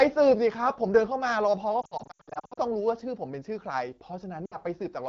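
Lost AMR speech frames: from 1.82 to 2.60 s, radio errors wipe out about 460 ms of frames across 760 ms, runs up to 80 ms, so the wideband decoder's concealed sound warbles and fades quickly. A shorter 60 ms dropout hits 4.46 to 4.57 s.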